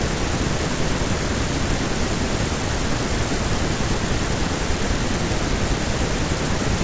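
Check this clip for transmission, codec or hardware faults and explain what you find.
No transmission, codec or hardware faults.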